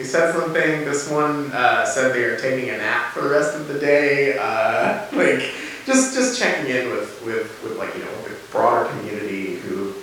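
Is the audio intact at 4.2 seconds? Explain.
Yes, at 4.2 seconds the speech runs through cleanly, with no dropout, click, distortion or other audible fault.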